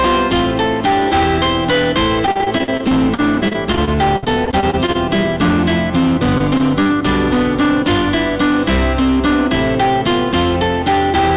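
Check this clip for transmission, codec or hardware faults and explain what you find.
Two faults stand out: constant overload distortion and two bursts of broken-up transmission, all heard through a narrowband call codec with nothing above 4 kHz.

Hard clipping runs throughout: the signal is driven about 12 dB past full scale, flattening roughly a fifth of samples and giving every loud moment a harsh fuzz.

Repeated packet loss (robotic sound) occurs from 2.26 to 4.96 s and again from 6.38 to 6.91 s. Lost packets are patched by extending earlier sound, leaving choppy stretches with gaps up to 58 ms.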